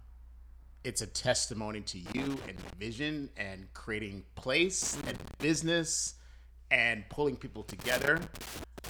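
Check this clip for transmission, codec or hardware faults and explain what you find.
Loose connector crackle occurs three times in this speech: from 2.06 to 2.73 s, after "it's a testimony to" and before "vision and creating"; from 4.82 to 5.56 s, after "vision and creating"; and from 7.69 s to the end, after "and pulling people". A worn contact makes and breaks, chopping the signal into irregular scratchy bursts. The ragged, uneven texture sets it apart from the regular, clean-edged gaps of digital dropouts.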